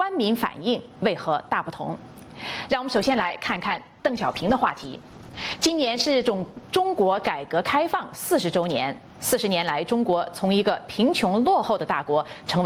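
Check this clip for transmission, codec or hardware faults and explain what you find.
Two faults are audible: gain pumping throughout, and a call bitrate drop in the middle.

Gain pumping runs the whole length. The gain swings by around 20 dB, leaving the audio squashed and flat in level. The likely cause is input gain set far too high, with a fast limiter or compressor clamping down on every peak.

The call bitrate drop lasts from 2.96 to 9.37 s. The sound turns rough, watery and dull, worst for about 2.8 s at the bottom of the dip. The encoder's rate fell from 48 to 12 kbps after the bandwidth estimate collapsed. That forced coarser coding and a lowered high-frequency cutoff until the rate recovered.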